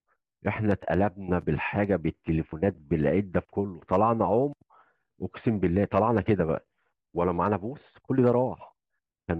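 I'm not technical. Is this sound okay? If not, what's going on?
No, there's one glitch worth knowing about. At about 2.52 s you'll hear a very brief blip lasting only around a hundredth of a second. That's damaged data in a compressed stream: part of the file got scrambled, so the player stumbled and had to find its place again.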